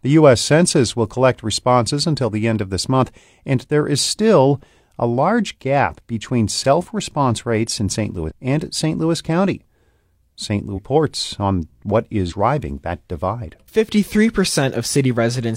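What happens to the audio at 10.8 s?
At that point the compressed stream carries damaged data: a stretch of the encoded file is corrupt, so the decoder misreads or rejects the frames there, loses sync and has to hunt for the next valid frame header before it can carry on. From 10.73 to 10.79 s, about 60 ms, the speech is broken by a short glitch, a chirp, squawk, click or brief hole, before normal decoding resumes.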